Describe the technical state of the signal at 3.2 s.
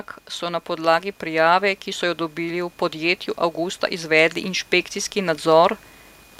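At 3.2 s the automatic gain is rising. From 0.39 to 5.85 s the control lifts the level by about 7 dB, so speech and background swell together.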